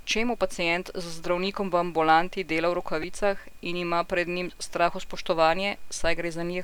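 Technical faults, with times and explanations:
3.02 s, repeated buffer: just after "v ambulanti dela v", a fragment about 2.7 ms long plays five times in a row, with a hard join at each repeat. At this size the loop is heard as a brief buzz rather than a stutter. About 10 ms of new audio is lost while the device waits for data. The 2.7 ms length fits a 128-sample buffer.
5.16 s, repeated buffer: the same 2.7 ms buffer plays once more before fresh audio arrives. This is a single repeat that costs roughly 3 ms, so it comes through only as a short click at the hard join.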